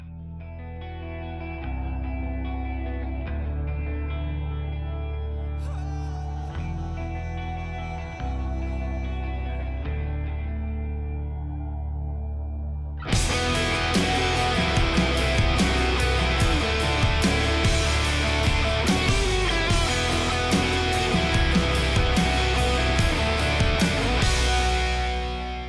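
Nothing here trips the ear, with no technical faults turning up anywhere in the audio.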